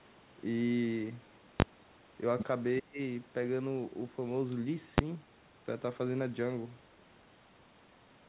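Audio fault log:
1.60–1.62 s and 4.98 s: invalid numbers at full scale. The 20 ms and 10 ms blocks sit pinned at one extreme value far beyond the speech peaks, heard as sharp bangs. The waveform shows flat slabs at one extreme, and the spectrogram shows bright full-height vertical stripes.
2.79–2.99 s: speech suppressed in double talk. The voice drops by roughly 30 dB for about 200 ms, likely an echo canceller ducking both sides during overlap. A dark gap appears in the spectrogram's energy below 4 kHz.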